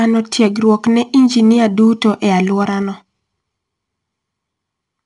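Throughout, 4-bit ADPCM compression codes each sample as a coarse step from a prediction, leaving level-following gritty hiss on the speech and nothing above 10.6 kHz, consistent with roughly 89 kbps. From 2.54 to 3.62 s, zipper noise comes from a fade down of around 10 dB applied in unsmoothed steps of about 2 dB, roughly five per second, each leaving a small audible click.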